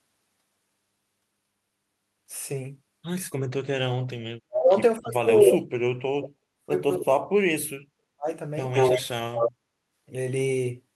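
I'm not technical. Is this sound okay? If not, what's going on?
No, there are two problems. The first is speech suppressed in double talk. The voice nearly vanishes for a split second at 3.65, then drops out in patches from 4.38 to 5.65 and again from 6.14 to 8.29. Most likely both ends talked at once and the call's echo canceller muted this side along with the echo it was trying to remove.

The second is echo leak. A delayed copy of the voice, about as loud as the original, shows up at 5.45 to 5.52 (lagging by 305 ms), then at 8.74 to 9.02 and 9.35 to 9.52 (lagging by 181 ms). That's likely a loudspeaker's sound getting back into a microphone and sent along.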